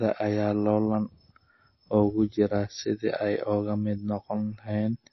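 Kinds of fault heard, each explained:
MP3 compression: The speech sounds dull and muffled throughout, with nothing above 5.8 kHz, and plainly audible codec damage gives it a watery, swirling texture. This is likely MP3 coding at a low bitrate, consistent with roughly 24 kbps. Short of bits, the encoder cuts all treble above a fixed point and drops weak frequency lines, letting them flicker on and off from frame to frame, which produces the swirl.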